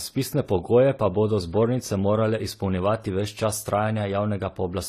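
Transcoding between lossy codecs runs through the whole speech clip. Nothing is heard above 14 kHz, and the smeared, swirly top end of a low-rate first encode sits under a second codec's own artefacts. The likely cause is a 24 kbit/s HE-AAC pass re-encoded to AAC-LC at 48 kbit/s.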